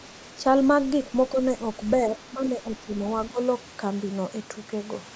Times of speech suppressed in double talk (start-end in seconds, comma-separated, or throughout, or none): 1.32-1.38, 2.08-2.88, 3.29-3.38